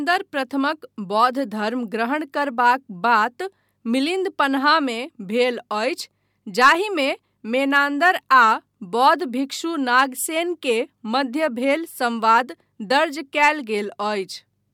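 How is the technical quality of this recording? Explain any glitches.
No glitches are audible anywhere in the recording, and nothing in it calls for explanation.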